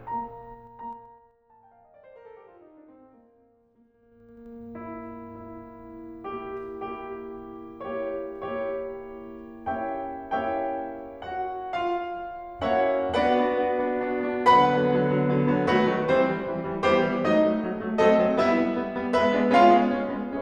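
A music clip with zipper noise at two level changes. From 0.48 to 1.4 s the level drops by roughly 20 dB. It falls in hard steps of about 3 dB, near seven a second. Each step leaves a small click, so a ticking rides on the music. From 3.9 to 4.52 s the level comes back up the same way, at about ten steps a second. The gain moves in coarse jumps with no smoothing.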